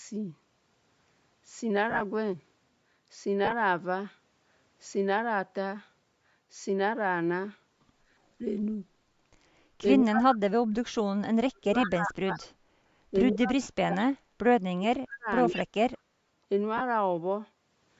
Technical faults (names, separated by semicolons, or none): lost LE Audio frames; speech suppressed in double talk; echo leak